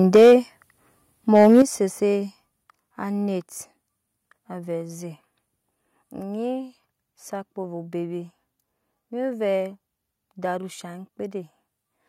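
Right at the start, from 0.14 to 0.34 s, the peaks go flat-topped and crackly, about 6 dB past the ceiling with roughly a fifth of the samples clipped. That's microphone overload, likely from the input gain being set too hot for the converter. Almost at once, at 0.16 s, the level drops by about 3 dB: the microphone volume stepped down, likely the call software pulling the input gain back after that distorted peak. It happens again right after a second overload from 1.35 to 1.62 s (about 3 dB over, roughly 15% clipped), with a bigger drop of about 9 dB at 1.62 s. A last small step of about 2 dB follows at 2.64 s. Voice and background fall together each time.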